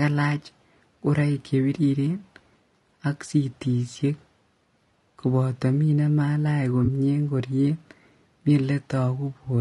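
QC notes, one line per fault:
throughout: low-delay AAC compression. The speech sounds rough and grainy, with noise filling the gaps between harmonics and a thin, synthetic-sounding top band. This is likely a low-delay AAC-ELD coder whose short frames blur pitch detail, and the damage fits a bitrate around 32 kbps.
6.85–6.88 s: AAC frame loss with concealment. A brief smeared, noisy blip interrupts the speech where about 20 ms of audio went missing, which fits a single lost frame. The decoder patched the gap from the preceding spectrum instead of the real signal.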